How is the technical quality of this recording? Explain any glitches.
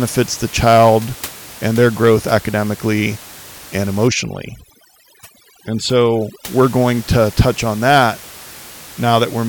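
One fault is audible in this speech recording, heard against room noise about 20 dB below the voice. From 4.08 to 6.47 s, after "their growth academically and" and before "we're going to touch", there is overdone noise removal. An over-strong noise reducer shuts off individual frequency bands near its noise estimate, taking quiet parts of the voice along. The background drops and breaks into twinkling, warbling specks. Unlike steady room noise, this comes and goes with the processing.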